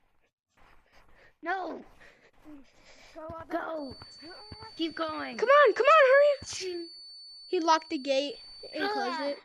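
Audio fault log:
3.71–9.45 s: feedback whistle, a thin 4.5 kHz tone that slowly swells and fades, sitting well under the sound, likely a speaker-to-mic loop hovering right at the feedback point.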